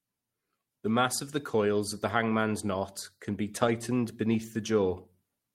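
Lost packets rebuilt from error correction affect this speech at 3.61–3.63 s and 3.67–3.69 s, just after "hangman's knot can be". Each 20 ms stretch was replayed from a low-bitrate copy carried in the following packet, so nothing drops out, but both moments sound briefly rougher and noisier.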